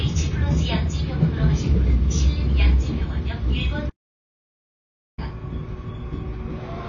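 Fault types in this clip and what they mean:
AAC compression: The sound is dull and band-limited throughout, with nothing above about 6.9 kHz and plainly audible coding damage in what remains. This is likely from low-bitrate AAC-LC, around 24 kbps. Unlike a simple low-pass filter, the band that survives is itself degraded.
Audio dropout to silence: From 3.90 s to 5.18 s the sound cuts off abruptly and about 1.28 s is lost to silence with no room tone. This likely comes from lost input, not a fade or noise gate, which would taper or leave a residual floor.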